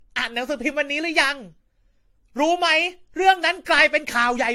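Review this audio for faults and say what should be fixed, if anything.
The whole clip has that swirly, hollow smear of generation loss, with consonant attacks blurred and nothing above 16.6 kHz. It sounds like the speech was likely run through a lossy encoder around five times, with each pass requantising on a shifted frame grid so the noise and spectral holes pile up. The character fits AAC-LC at something like 64 kbit/s, but it's worse than one pass at that rate would give. Going forward, keep a lossless master and encode only once, at the final delivery step.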